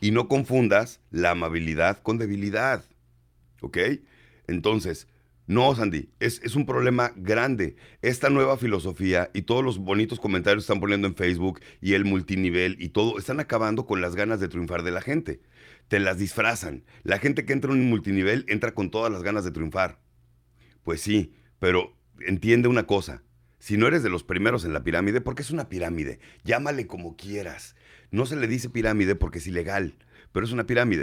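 No technical faults can be heard anywhere in the speech, and the signal stays steady and intact throughout.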